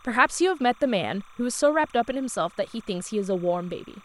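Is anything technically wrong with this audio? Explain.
Yes. Timecode bleed runs through the whole speech clip. Linear timecode from a nearby track or cable has leaked in. Its square wave flips between tones near 1 and 2 kHz, at a rate fitting 29.97 frame-per-second code. It sits roughly 30 dB below the speech, a steady chirping warble.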